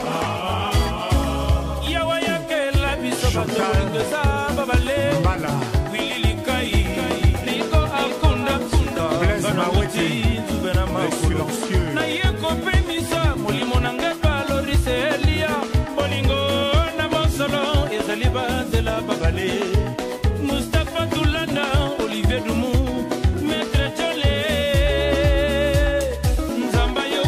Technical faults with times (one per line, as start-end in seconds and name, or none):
6.65-8.99 doubled audio track